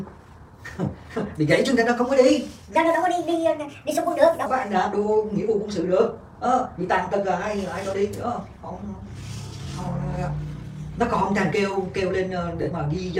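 From 2.76 to 4.46 s there's a section at the wrong speed. It runs about 1.34 times too fast, so everything jumps roughly five semitones higher and sounds hurried, then snaps back. The likely cause is that stretch being played or edited against the wrong clock. Near the end, from 12.62 to 12.66 s, lost LE Audio frames leave a 40 ms noisy smear. That points to about four dropped LC3 frames, with the decoder filling the gap by reusing the last spectrum with scrambled signs and starting to fade it out.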